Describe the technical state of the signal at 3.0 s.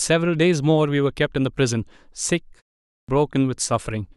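At 3.0 s the output device is still waking up. After a 0.34 s pause it had dropped into a sleep state and had to re-lock before passing sound again. That is a clipped start after a pause, running from 2.87 to 3.09 s, and roughly 215 ms of audio is lost. The speech that resumes there enters abruptly out of silence with its opening sounds missing, so the first word arrives already under way.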